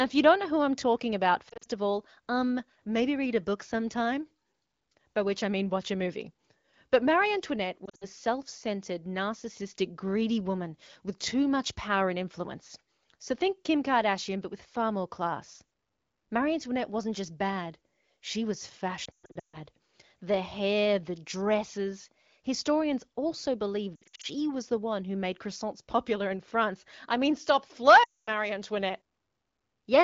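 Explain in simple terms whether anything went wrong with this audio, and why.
Radio errors corrupted some of the phone call's speech data, so the HD Voice decoder threw those pieces away and filled the gaps by stretching out the last good sound while turning it down. These lost AMR speech frames cause brief wobbles or dropouts at 1.50 to 1.66 s, 7.86 to 8.07 s (just before "self centered narcissistic greedy"), 19.05 to 19.58 s (after "just bad she was"), 23.95 to 24.26 s, and 28.03 to 28.30 s (after "I mean stop").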